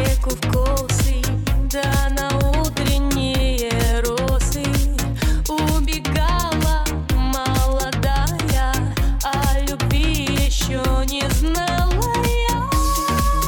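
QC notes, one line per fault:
No faults found in this recording.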